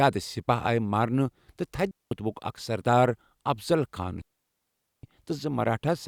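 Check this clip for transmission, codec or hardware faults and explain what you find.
Two digital wireless dropouts break up the speech, at 1.91 to 2.11 s and at 4.22 to 5.03 s. In each case the radio link lost more data than the receiver could conceal, so it muted the output with a very fast fade rather than pass corrupted audio. The result is a clean hole of near silence, about 0.2 s long the first time and about 0.82 s the second, with no burst of noise on either side.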